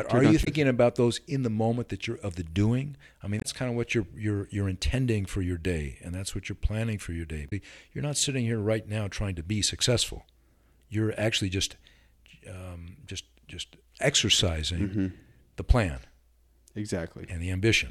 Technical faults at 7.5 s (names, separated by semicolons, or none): damaged data in a compressed stream